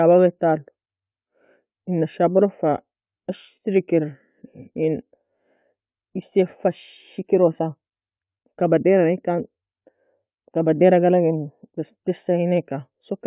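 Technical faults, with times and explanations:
No technical faults can be heard in this speech recording.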